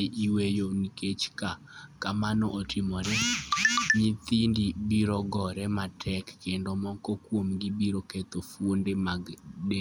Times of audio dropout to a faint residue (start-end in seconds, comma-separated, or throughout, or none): none